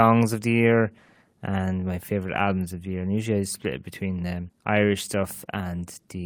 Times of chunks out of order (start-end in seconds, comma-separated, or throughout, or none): none